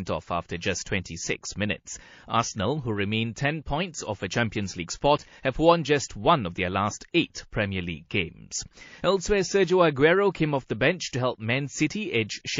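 Throughout, likely MP3 compression at a starved bitrate, consistent with about 32 kbps, cuts off the treble and leaves the speech watery and swirly, with metallic s sounds.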